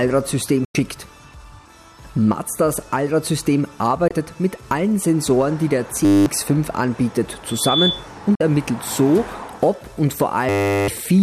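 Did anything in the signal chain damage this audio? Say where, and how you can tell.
Yes. Digital broadcast dropouts at the reception stage: sound fades to silence within 3 ms at 0.65–0.75 s, 4.08–4.11 s and 8.35–8.41 s. Gap lengths fit lost 24 ms frames.

A system hang loop in the driver or buffer stage: a 10 ms piece repeats as a 100 Hz buzz at 6.05–6.26 s and 10.49–10.88 s.

Loudspeaker feedback squeal in the acoustic path: a 3.5 kHz tone swells over about a third of a second at 7.47–8.08 s. It ends roughly 5 dB above the signal.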